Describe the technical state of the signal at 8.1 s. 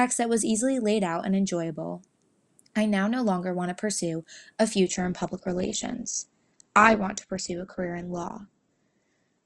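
At 8.1 s the speech sits inside an adaptive stream at a lower bitrate, running from 4.87 s to the end. A slowed connection forced a sudden, gapless switch to a lean encode, which fits Opus dropping from about 64 to 12 kbit/s. Treble is gone above 8.2 kHz and codec artefacts are thicker.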